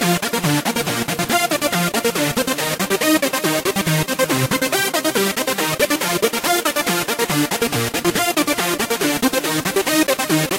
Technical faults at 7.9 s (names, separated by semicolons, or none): none